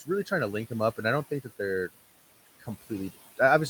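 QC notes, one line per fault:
Throughout, noise suppressor artifacts: per-frame band gains cut room noise about 16 dB between phrases, letting it rise under speech; spectrogram shows a gated noise floor.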